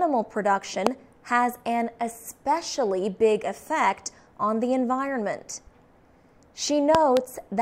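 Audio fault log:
0.87–0.89 s, loud pop: a sudden voltage step, likely from a switch, plug contact or static discharge, entered the signal path, and the stages after it turned that step into a brief pulse. The result is a single sharp pop about 20 dB above the surrounding sound, which carries on beneath it.
6.95–7.19 s, loud pop: likely a second electrical disturbance of the same kind, such as a glitch in the driver or a contact. It produced two pops in quick succession, peaking about 20 dB over the sound, and the sound continues underneath both.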